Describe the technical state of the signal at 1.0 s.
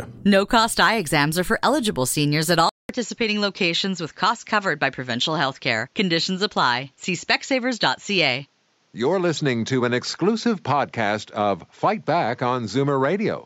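At 1.0 s the signal is intact, with no audible technical fault at that moment.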